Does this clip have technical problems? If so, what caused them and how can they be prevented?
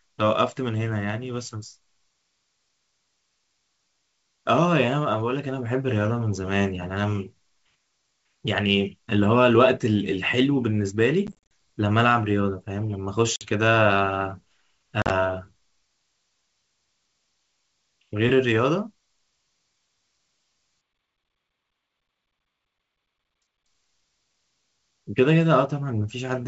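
Yes. Packet loss on an ADPCM call causes hard-edged silent gaps at 11.27 to 11.35 s (about 140 ms lost in bursts over 240 ms, the longest 40 ms), 13.36 to 13.50 s (50 ms) and 15.02 to 15.11 s (60 ms over 80 ms). Unlike a simple dropout, each gap is followed by a slightly distorted restart. The receiving decoder's predictor and step size have drifted from the sender's and need tens of milliseconds to realign. A jitter buffer with packet-loss concealment, or redundancy such as FEC on a less lossy network path, would prevent it.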